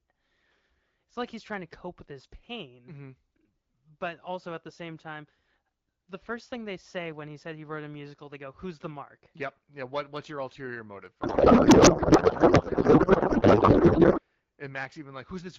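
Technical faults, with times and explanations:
11.21–14.20 s, codec payload misread: the receiving end stopped unpacking the AMR wideband frames the way the sender packed them, which fits octet-aligned frames being read as bandwidth-efficient, so every parameter lands in the wrong field. The decoder still produces output, but for these three seconds the speech gives way to garbled noise and warble that barely tracks the talker. Before this the wideband coding sounds lightly coded, consistent with around 12.65 kbit/s.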